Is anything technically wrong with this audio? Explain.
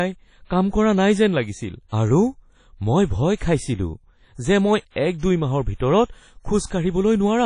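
Yes. Throughout the speech there is a ringing, washy smear around each sound, with a hiss that swells and fades along with the signal, and nothing at all above 10.1 kHz. This is likely WMA compression: the transform codec spreads its quantisation noise across tens of milliseconds within each long block and zeroes weak spectral lines, and the plainly audible damage fits a low bitrate around 32 kbps.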